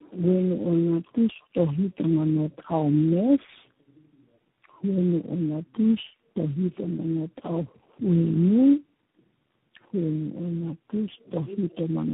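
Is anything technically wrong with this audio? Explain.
Yes. Tandem speech coding affects the whole clip. The sound points to a call that crossed several networks, each with its own low-rate speech codec, here about four in succession, likely AMR-NB, G.729A twice and finally G.726, joined by G.711 links. Each coder re-encodes the previous one's errors, so they compound. The speech sounds rough, muffled and warbly, and nothing above 3.8 kHz survives.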